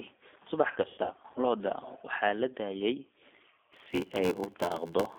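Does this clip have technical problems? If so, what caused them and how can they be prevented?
Yes. G.729 codec damage runs throughout: the speech passes through an 8 kbit/s model of vocal tract, pitch and pulses, limited to about 250 Hz to 3.5 kHz, so it sounds plainly rough, synthetic and thin. Prevent it by using a wideband codec such as Opus.

VoIP packet loss concealed by the speech codec occurs from 0.68 to 1.40 s. About 360 ms of audio drops out in scattered gaps, the longest 100 ms. The decoder stretches its last frame into a fading buzz or coloured noise, and the voice stays weak afterward. Prevent it with jitter buffering, forward error correction or a more reliable network path.

A block size mismatch (padded) runs from 3.72 s to the end. The stage feeding the reader writes short blocks, and zeros fill the rest of each 512-sample read. This puts a gap in every block, heard as an 86 Hz buzz, with speech slowed to 0.861 times its speed at about the same pitch. 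Prevent it by matching block sizes or buffering between the stages.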